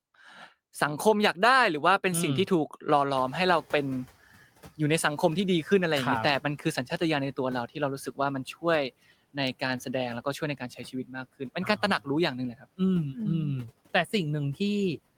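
At 3.17 s the noise suppressor is catching up. The room noise jumps by about 23 dB at around 3 s, and the suppressor's estimate trails it. The noise arrives with less reduction at first, then sinks by about 10 dB over 960 ms, ending at 4.13 s. A real change in the room would stay steady rather than fade away like this.

Between 10.58 and 11.11 s there is speech cut by the noise suppressor. Brief fragments totalling roughly a tenth of a second are pushed down, by about 12 dB at the deepest, and sound swallowed. The background sinks along with them, so these are not clean dropouts into silence.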